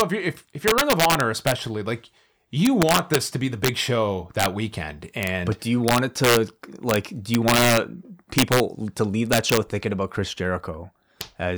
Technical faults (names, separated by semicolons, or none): integer overflow